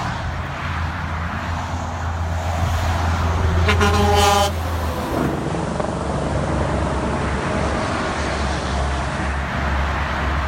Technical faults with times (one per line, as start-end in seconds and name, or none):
5.25-9.52 digital radio blending to analogue